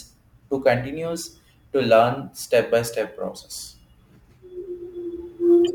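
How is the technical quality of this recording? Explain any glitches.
The recording carries sample clock jitter across its whole length, and it degrades the speech audibly. The converter's clock wanders by a few microseconds, so each sample lands slightly early or late. On steep parts of the waveform that timing error becomes an amplitude error, sitting roughly 35 dB below the signal. It is heard as a gritty hiss riding on louder and brighter speech sounds, especially sibilants, and it drops away in the pauses.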